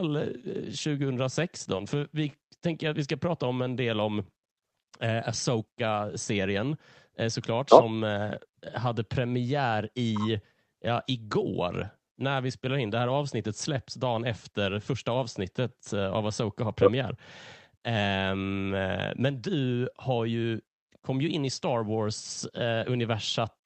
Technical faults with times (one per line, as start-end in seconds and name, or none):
none